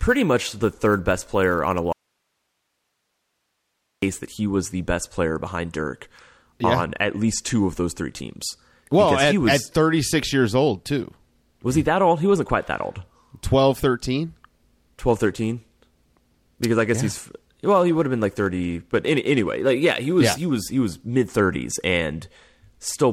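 An audio dropout to a faint residue runs from 1.93 to 4.02 s, about 2.1 s of lost speech. The sound cuts out abruptly, leaving only hiss roughly 55 dB below the voice. That points to the signal likely being lost upstream while the path after the break stayed live.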